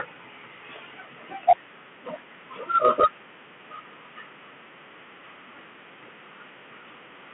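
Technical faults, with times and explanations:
Throughout: Bluetooth CVSD headset codec. The speech sits in a narrow band of about 150 Hz to 3.4 kHz, and the one-bit delta coding, consistent with a 64 kbps CVSD link, lags fast loud changes, leaving scratchy s sounds over a granular hiss.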